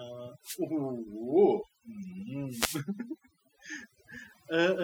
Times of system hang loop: none

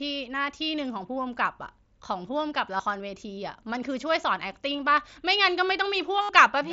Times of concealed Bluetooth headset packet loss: 2.77-2.80, 4.74, 6.21-6.29

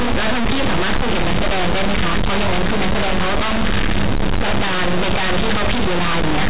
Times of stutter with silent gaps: none

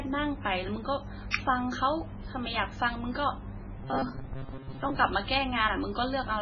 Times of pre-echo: 1.30-1.34

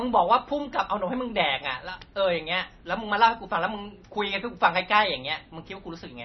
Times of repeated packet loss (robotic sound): none

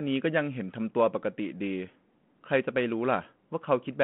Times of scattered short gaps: none

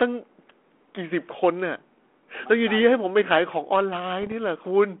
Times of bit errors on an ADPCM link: 4.22-4.33

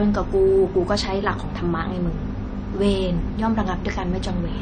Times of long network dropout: none

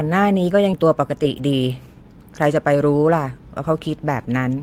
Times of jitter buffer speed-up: 0.83-2.04

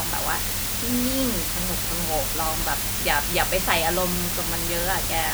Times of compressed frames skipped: none

